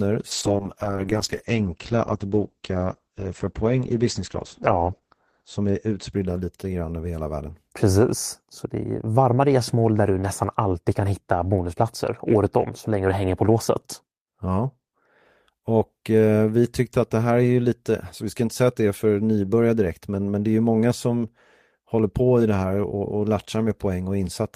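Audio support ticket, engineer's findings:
Call bitrate drop, 0.33 to 7.39 s: encoder pushed from 32 kbps to about 9 kbps, lowest for 4.7 s; coarse, watery speech with highs cut from 20 kHz to 8 kHz bandwidth.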